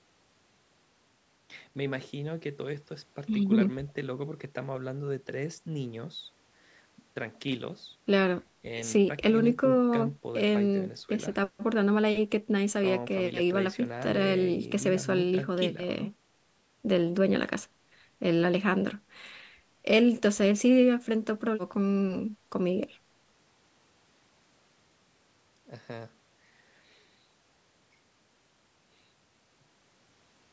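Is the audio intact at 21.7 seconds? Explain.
Yes, the speech at 21.7 seconds is intact, with only the ordinary band limit of call microphone processing, nothing above 8 kHz, and no fault at that moment.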